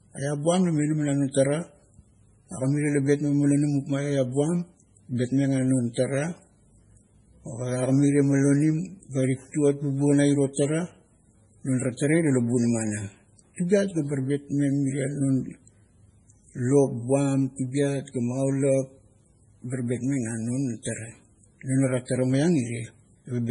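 Throughout, nothing sounds above 10.5 kHz. The speech is watery and swirly, with metallic chirps on s sounds and soft attacks. The likely cause is heavy MP3 compression, which fits a very low bitrate near 24 kbps. Starved of bits, the encoder dropped the treble and kept switching weak frequency lines on and off.

Pre-echo appears three times. At 5.94 s a short hiss precedes an attack by 27 ms. At 10.53 s, after "bubuo na iro", it spreads 38 ms. At 11.97 s, after "non ara", it spreads 23 ms. Each time, noise meant for a loud onset leaked into the quiet just before it, leaving that onset smeared.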